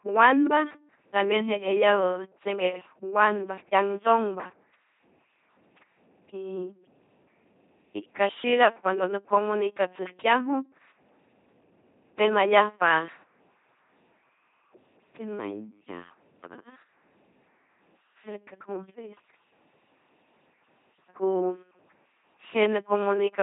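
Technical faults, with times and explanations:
Throughout: LPC-10 vocoder. The speech has the buzzy, mechanical robot quality of a ten-pole vocal tract filter driven by either a pulse train or noise, with each moment treated as fully voiced or fully unvoiced. Wrong voicing decisions show up as sudden buzz or hiss. Nothing remains above 3.8 kHz. The damage is heavy, which fits a 2.4 kbit/s rate. The hard buzz-or-hiss switching sets it apart from the rougher but natural-sounding texture of CELP-family codecs.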